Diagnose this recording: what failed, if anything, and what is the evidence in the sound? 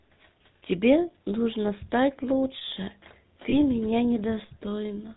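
The speech carries a buzzy, gravelly roughness from start to finish, and nothing above 4 kHz comes through, so sibilants sound dull and clipped. This is the GSM full-rate codec at the codec stage, and the damage is plainly audible. The coder models the vocal tract and excites it with a coarse, regularly spaced pulse train built from only a third of the excitation samples. That thin excitation, which fits the 13 kbps GSM full-rate rate, produces the grainy texture.

From 3.50 to 3.54 s the sound briefly freezes into a rough, metallic ring before normal speech resumes. These are lost GSM frames, a network-stage loss that the decoder concealed. When a frame arrives bad, the decoder reuses the parameters of the last good frame, which sustains the preceding sound instead of leaving a gap. The short duration is consistent with a single dropped 20 ms frame, too brief to fade to silence.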